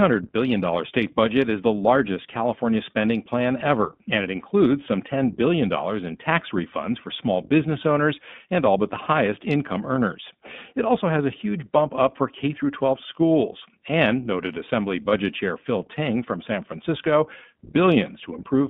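The iLBC codec shapes the whole speech clip. The band runs from 150 Hz to 3.6 kHz. The voice sounds plainly rough and synthetic, which fits 15.2 kbps.

Lost iLBC frames occur at 3.02 to 3.04 s and 15.10 to 15.12 s. Each gap lasts about 20 ms, which points to one dropped frame. The decoder fills it with a brief buzzy, held vowel, then recovers at once.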